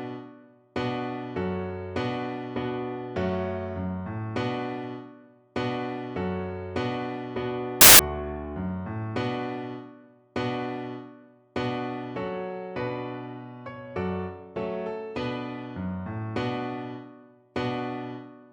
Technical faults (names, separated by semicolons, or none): samples built from the wrong bytes